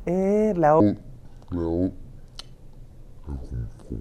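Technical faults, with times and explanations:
0.80–4.01 s: section at the wrong speed. The speech runs at 0.62 times, roughly seven semitones deeper, with tempo and pitch falling together, likely from a mismatched clock.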